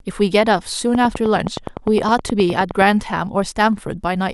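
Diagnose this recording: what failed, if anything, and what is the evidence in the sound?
A train of clicks runs from 0.95 to 2.83 s: around twenty near-identical pulses at a regular 9.7 per second, peaking roughly 10 dB above the speech and audible in pauses too. A periodic injection like this most likely comes from interference in the analogue wiring.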